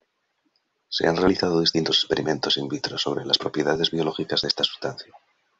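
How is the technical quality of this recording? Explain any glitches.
Two brief glitches mark the speech: single sharp clicks at 1.11 s and 4.90 s. These are most likely dropped samples, where only a handful of samples, a fraction of a millisecond, vanish, so the waveform leaps abruptly. Unlike a dropout, no sound goes missing; only an isolated click is heard.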